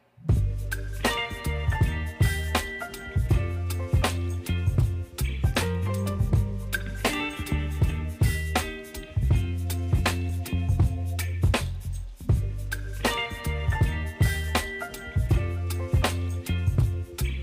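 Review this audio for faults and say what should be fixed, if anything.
A repeated buffer at 10.30 s: fresh audio arrived late, so about 1.33 ms (fitting a 64-sample buffer) was played once more, leaving a brief click with essentially nothing lost. Preventing it means giving the audio thread more headroom, through a larger buffer or higher scheduling priority, so data always arrives before the device needs it.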